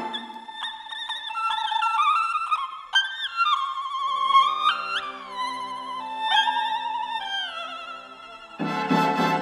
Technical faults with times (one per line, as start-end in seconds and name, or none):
0.00-9.41 audio read two samples at a time (double speed)